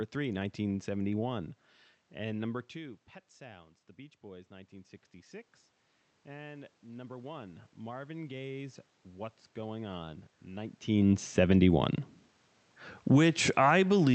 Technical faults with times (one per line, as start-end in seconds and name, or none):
2.11-4.99 automatic gain rising
6.23-10.30 automatic gain rising